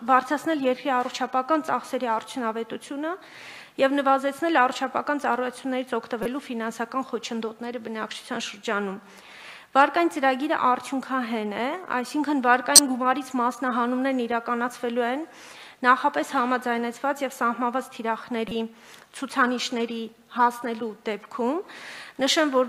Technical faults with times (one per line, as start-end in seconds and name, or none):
6.23-6.26 corrupt frame decoded
12.75-12.79 corrupt frame decoded
18.48-18.51 corrupt frame decoded